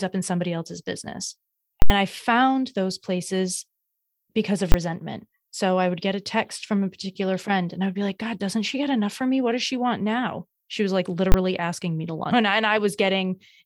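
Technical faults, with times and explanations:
1.82–1.90 s, invalid numbers at full scale: a calculation returned infinite or invalid values for an 80 ms block, pinning the output at maximum level. This produces a very loud pop at each edge with no speech in between.
4.72–4.74 s, invalid numbers at full scale: the same failure over a 20 ms block. It is so short that both edges merge into one bang.
11.32–11.34 s, invalid numbers at full scale: another 20 ms block forced to one extreme value, heard as a single bang.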